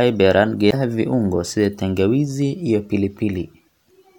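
At 0.69 to 0.74 s, just before "viungo sida tangawizi", the speech jumps ahead in a brief glitch, likely a broken MP3 bit reservoir, showing as a waveform discontinuity.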